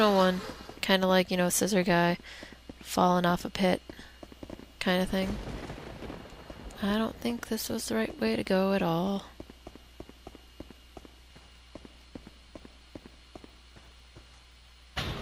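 No technical faults can be heard anywhere in the audio; the signal stays steady and intact throughout.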